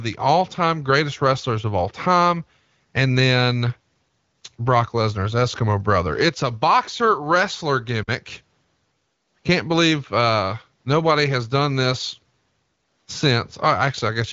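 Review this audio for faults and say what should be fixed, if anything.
Nothing here needs fixing; the speech simply arrives through an AMR wideband (HD Voice) path, with the top end stopping around 7.5 kHz as that codec's bandwidth would lead you to expect.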